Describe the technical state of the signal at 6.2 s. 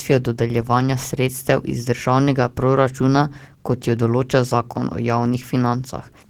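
At 6.2 s, as throughout the speech, Opus voice compression leaves hybrid-coded hoarseness and slight robotic texture without narrowing the band, which fits a bitrate around 16 kbps.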